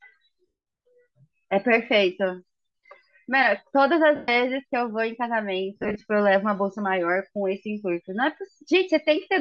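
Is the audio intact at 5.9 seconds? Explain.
No. From 5.76 to 6.01 s there are lost LE Audio frames. About 105 ms of audio drops out in short bursts scattered across 240 ms, the longest lasting a few tens of milliseconds. Each time, the decoder repeats the last spectrum with random phase. The sound briefly smears into a noisy blur.

The whole clip, including this moment, also has a breathy, grainy upper edge. That texture is likely Bluetooth LC3 compression. The upper spectrum is thinned and partly replaced with noise, which fits a fairly low bitrate of around 48 kbps with 7.5 ms frames.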